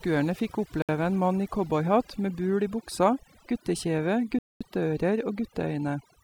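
Overdone noise removal runs through the whole speech clip: the cleaner clamps bands near its noise estimate, so the background drops and breaks up into twinkling specks. At 0.82 s the sound cuts out for about 66 ms, and again at 4.39 s for about 219 ms. That's most likely a Bluetooth stall, with the headphone buffer running dry while delayed packets were held up.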